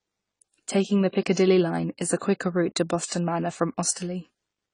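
From start to finish, the speech sounds dull and smeared. Nothing is heard above about 10 kHz, so the top end is simply missing. The texture warbles and fizzes, and the damage is plainly audible. This is likely AAC compression, coded as AAC-LC. The encoder was short of bits and dropped high frequencies to save data. It also quantised the remaining spectrum coarsely, leaving gaps. That fits a low bitrate of around 24 kbps.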